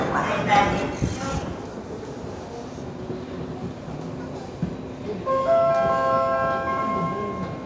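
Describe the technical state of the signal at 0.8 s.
At 0.8 s the sound is intact, with only the normal band limit of call microphone processing, which leaves nothing above 8 kHz.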